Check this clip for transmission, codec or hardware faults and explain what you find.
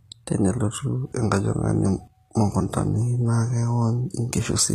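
One codec fault runs through the whole clip. Throughout, the speech shows HE-AAC compression, likely from an HE-AAC v2 encoder at a low rate around 20 kbps. It codes only the lower spectrum and synthesises the treble from copied bands, so sibilants sound plainly gritty and metallic, and nothing remains above 14.9 kHz.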